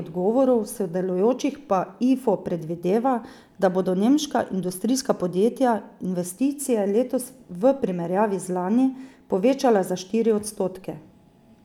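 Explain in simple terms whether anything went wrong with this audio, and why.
The converter's timing clock wobbled, a problem called sample clock jitter: each sample was taken about one and a half millionths of a second too early or too late. Throughout the speech this adds a faint hiss or roughness that grows on loud, bright sounds and disappears in pauses.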